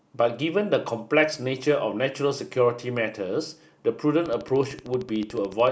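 Speech clip with a train of clicks from 4.26 to 5.68 s: around twenty near-identical pulses at a regular 13.4 per second, peaking a few decibels above the speech and audible as steady ticking. The likely cause is electrical interference from nearby equipment or a faulty connection or power supply.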